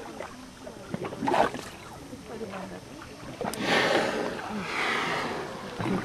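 At 1.98 s there's a case of compressed frames skipped. A few frames never got decoded, so the sound jumps ahead by roughly 70 ms, which fits about three frames of 23.2 ms.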